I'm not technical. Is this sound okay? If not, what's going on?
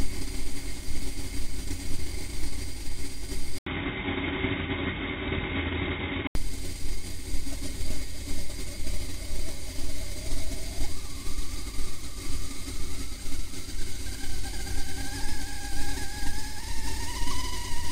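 No. The input likely switched to a poorer device from 3.58 to 6.35 seconds. There is a short gap at the switch. Then the sound turns dull and slightly quieter. Nothing above 3.8 kHz remains, and new background noise appears.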